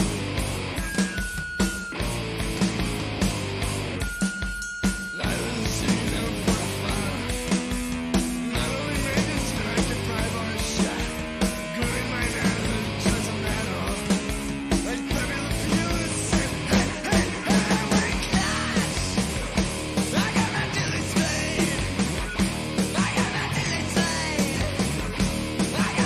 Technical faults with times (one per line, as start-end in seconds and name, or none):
none